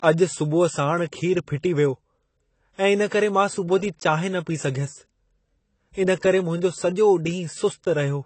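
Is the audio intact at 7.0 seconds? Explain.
No. At 7.0 seconds the speech carries the same AAC compression damage heard throughout the clip, likely from AAC-LC coding at a bitrate that fits about 24 kbps. With so few bits, the encoder quantises its frequency lines coarsely and discards detail, so the speech sounds dull and smeared, with a watery, fizzy edge on sibilants. On a spectrogram, expect a lowered upper cut-off and patchy gaps in the higher bands.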